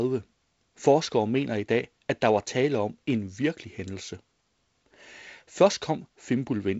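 No technical fault can be heard anywhere in this speech clip. It has passed through G.722 wideband telephone coding at 48 kbit/s, so nothing reaches above about 7.7 kHz, and the reduced bitrate leaves a light layer of coding noise in the lower band alongside a faint hiss in the upper one.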